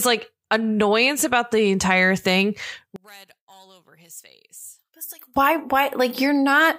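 A speech clip. From 2.96 s to 5.36 s, just after "about the entire thing", the speech drops by about 22 dB and turns faint. The likely cause is one channel inverted. Reversed polarity makes the shared centre content cancel when the channels are summed to mono.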